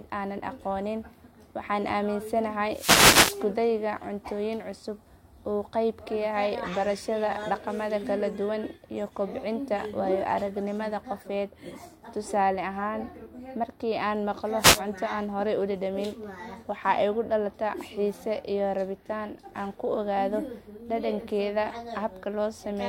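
At 2.70 to 3.45 s and again at 14.58 to 14.82 s, wireless microphone noise hits break through: the FM radio link fades, receiver hiss surges into a swish of static, showing as broadband vertical smears on the spectrogram and fuzzy waveform bursts.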